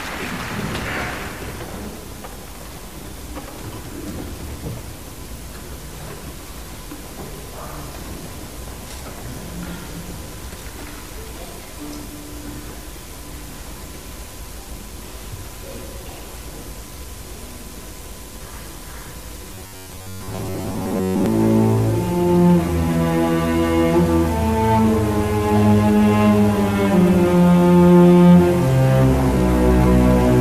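From 19.54 to 21.26 s the sound collapses into a rigid, metallic buzz pitched at 93.8 Hz: robotic sound from repeated short buffers. The likely cause is audio arriving too seldom, so playback loops the last segment, about 10.7 ms long, over and over while fresh material is skipped, with most of the stretch repeated. On a spectrogram this appears as flat, evenly spaced harmonic lines at multiples of 93.8 Hz. The waveform shows near-identical cycles repeating back to back.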